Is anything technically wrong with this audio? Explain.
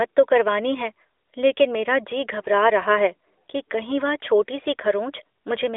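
No, nothing here is technically wrong.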